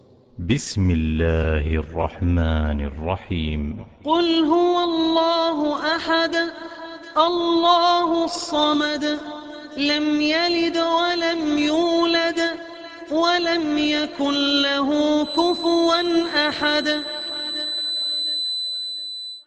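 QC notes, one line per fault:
15.19–19.47 s, feedback whistle: a thin, steady tone near 4 kHz sits roughly 10 dB below the sound and swells and fades slowly in level through to the end. This is likely a loudspeaker-to-microphone loop held just at the edge of feedback, sustaining one frequency without building further.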